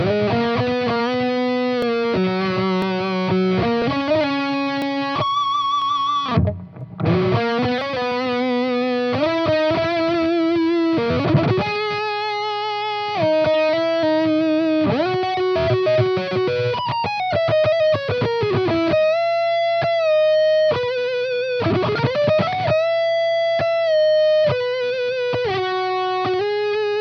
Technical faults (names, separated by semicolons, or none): periodic USB or driver dropouts